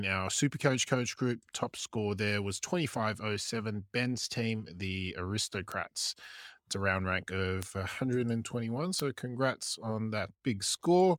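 Three sharp, broadband ticks cut through the speech: at 5.72 s after "team the" (about -21 dBFS), 7.63 s after "a round rank" (about -15 dBFS), and 9.00 s just before "congrats on" (about -9 dBFS). Each is a bit error spike, where a single flipped bit throws one or two samples off by a power of two before they snap back.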